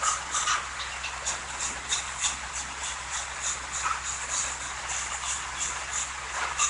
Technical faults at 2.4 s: Nellymoser compression

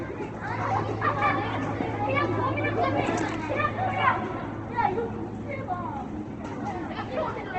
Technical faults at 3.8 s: Opus compression

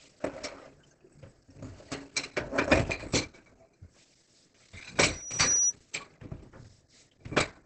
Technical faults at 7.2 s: Opus compression

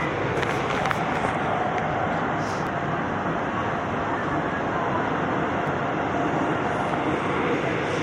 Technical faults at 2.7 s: overlapping chunks

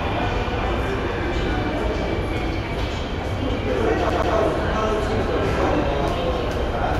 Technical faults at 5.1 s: none

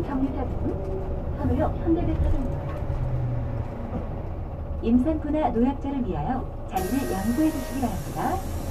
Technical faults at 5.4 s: none

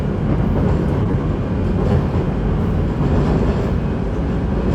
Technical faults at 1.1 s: short stall from a late packet; short concealed packet loss

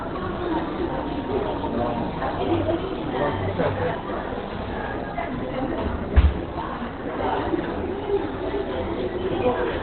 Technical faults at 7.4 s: Opus compression

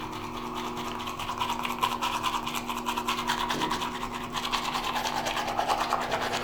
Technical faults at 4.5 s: periodic USB or driver dropouts

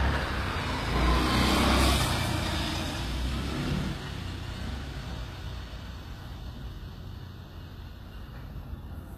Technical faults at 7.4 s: HE-AAC compression

